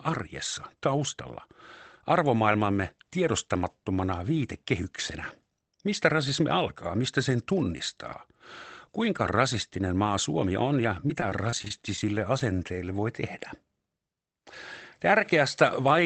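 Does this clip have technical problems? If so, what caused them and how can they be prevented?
Yes. Between 11.08 and 12.03 s, just after "on ja", there is repeated packet loss with a robotic sound. Ten separate holes, together about 120 ms and none longer than 25 ms, were each patched by extending the preceding sound, so about 13% of that stretch is synthetic fill. Unlike a single dropout, the holes recur in quick succession, which makes the stretch choppy and mechanical rather than briefly smeared. A steadier network connection or a deeper adaptive jitter buffer would prevent this.

At 12.39 to 12.41 s, just before "voi tehdä", there is short concealed packet loss. About 10 ms of audio never arrived, and the receiver filled roughly 14 ms by continuing the last sound and then blending back into the real signal. It is a single brief smear rather than a choppy run. Reducing packet loss and late arrival on the link, or giving the jitter buffer more headroom, would prevent it.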